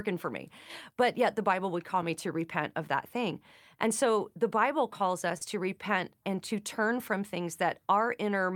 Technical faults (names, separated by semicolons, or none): short concealed packet loss